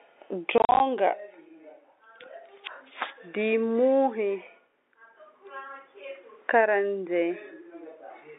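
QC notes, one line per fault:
0.58 to 0.80 s, packet loss filled with silence: the sound is chopped by hard-edged gaps totalling 120 ms (longest 40 ms). Lost packets, consistent with 10 ms packets, were replaced by silence.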